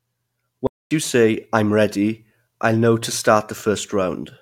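A speech clip with a playback stall: the audio drops to silence from 0.67 to 0.91 s, about 240 ms, then resumes at "you say i'm ready", likely from a starved buffer or blocked thread.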